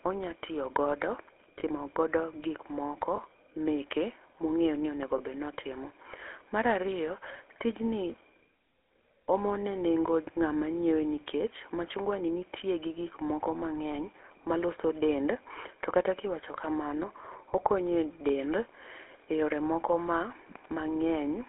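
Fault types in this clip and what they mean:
GSM full-rate codec: The speech has a buzzy, gravelly roughness throughout, confined to about 300 Hz to 3.5 kHz. This fits the 13 kbps GSM full-rate codec, which rebuilds the voice from a vocal-tract model driven by coarse, regularly spaced pulses.
Lost GSM frames: Brief rough, metallic rings appear near 1.6, 3.16, 5.18 and 13.92 s. Each is a 20 ms gap, consistent with a single missing frame, where the decoder repeated the previous frame's settings instead of producing new sound.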